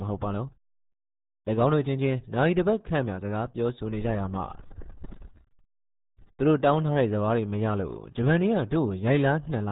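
Heavy RealAudio 14.4 coding throughout this speech: nothing above about 3.8 kHz survives, fitting an 8 kbit/s dial-up codec, leaving the voice muffled and gargly.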